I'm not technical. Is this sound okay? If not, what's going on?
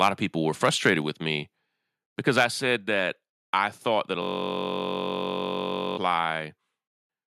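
No. Three separate problems can be heard in this speech clip.

At 0.02 s, from 0.64 to 0.89 s (between "of people were" and "with me"), and at 2.37 to 2.45 s, the loudest moments turn harsh and crackly. This is microphone overload: the microphone was likely set so high that the tops of the loudest sounds were chopped off.

At 1.02 s, just before "with me", and again at 2.76 s, the voice and background suddenly get a little quieter all at once. This is the microphone volume stepped down, likely the call software turning the microphone down in one step after those crackly peaks.

From 4.22 to 5.97 s, right after "I thought that a", the sound turns into a steady buzz. This is a system hang loop: the computer likely froze and kept replaying the same tiny scrap of sound, about 21 ms long, roughly 47 times a second. About two seconds of speech is lost there.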